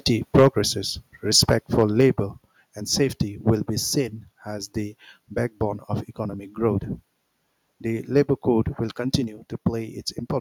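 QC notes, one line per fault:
0.35–0.47 s, microphone overload: the opening peaks crackle harshly with flattened tops on a large share of the waveform, about 6 dB past full scale, likely from mic input gain set too high for the converter.
0.39 s, microphone volume stepped down: the speech and room sound drop abruptly by 3 dB in the middle of that distorted burst, likely the call software cutting the mic's input volume in one step after detecting clipping.
1.39–2.06 s, microphone overload: a lighter, intermittent rasp on the loudest syllables, with peaks about 3 dB over the limit and only a small fraction of samples cut off. The likely cause is input gain still too hot for the converter.
2.01 s, microphone volume stepped down: another sudden 4 dB level drop across speech and background near the end of that stretch. This is likely the software lowering the device volume again in response to the clipping.
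3.48–3.50 s, microphone overload: a brief crackle between "and safety" and "be seen as the", where peaks run about 2 dB over and a short run of samples is flattened, likely from the mic gain overshooting the converter's ceiling.
9.14–9.16 s, microphone overload: a short harsh crack right after "code will", with peaks about 4 dB over full scale and their tops clipped, likely because the input level is still too high for the converter.
9.24 s, microphone volume stepped down: shortly after "code will" the whole signal steps down by 2 dB at once, likely the call software trimming the input volume once more after that distorted peak.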